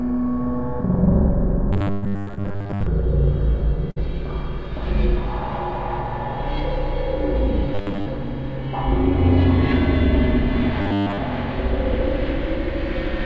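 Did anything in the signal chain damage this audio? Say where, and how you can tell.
Yes. At the buffer stage, between the decoder and playback, the sound turns into a rigid, metallic buzz at a fixed 100 Hz from 1.73 to 2.87 s, 7.75 to 8.06 s and 10.82 to 11.18 s. Most of the underlying audio in those spans is lost to repetition, and what remains follows the original only loosely. This is likely robotic sound from repeated short buffers. New audio arrived too seldom, so the software kept replaying the last 10 ms block, and that interval sets the 100 Hz buzz.

In the network stage there are three bursts of packet loss. From 1.92 to 2.04 s about 101 ms was filled while 100 ms of audio went missing. From 2.20 to 2.29 s the receiver filled 66 ms for 60 ms lost, and from 3.91 to 3.98 s it filled 54 ms for 60 ms lost. Each gap comes across as the last sound being held and fading, either a held buzz or a fading hiss. 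The audio then resumes further on, with the material in between gone.

Also in the network stage, there is short concealed packet loss between 2.35 and 2.39 s, where 20 ms of audio never reached the decoder in time. The receiver covered it with about 21 ms of continuation built from the preceding sound and then blended back into the real signal. The result is a brief smear or wobble, during which a short transient can drop out. The G.722 call codec, which fits a 64 kbps stream, carries nothing above 8 kHz.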